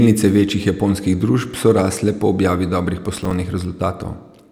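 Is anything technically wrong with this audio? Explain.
Yes. From 3.17 to 3.33 s, just after "rasle po objavi dobrih", there is processor overload crackle. The processor couldn't finish its short audio buffers, each about 5 ms, on time, and several deadlines were missed in a row. Each miss left a hard-edged slice of silence, so the speech breaks into a gritty burst of crackle. A single dropout would be one clean gap, and clipping would distort only the peaks. This is a rapid cluster of tiny gaps that stops once the load passes.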